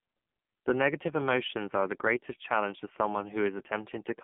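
Buzzy, synthetic speech runs through the whole clip, thin and boxed in, with nothing above 3.7 kHz. The AMR narrowband mobile codec is at work: a vocal-tract model driven by sparse pulses, its heavy damage pointing to a low 5.9 kbps mode.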